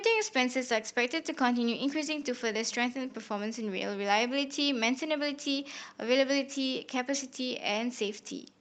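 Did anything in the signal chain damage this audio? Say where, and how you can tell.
No, nothing in the chain damaged this speech: the only mark is the call path's Opus codec, whose top end stops at 8 kHz, which fits a moderate bitrate of around 32 kbps and is normal behaviour for that stage, not a fault.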